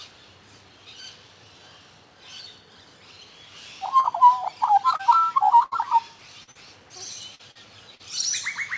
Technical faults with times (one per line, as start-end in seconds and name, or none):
4.00-4.07 short concealed packet loss
4.96-5.02 short concealed packet loss
5.63-5.74 burst of packet loss
6.43-6.58 short concealed packet loss
7.35-7.58 short concealed packet loss
7.95-8.02 short concealed packet loss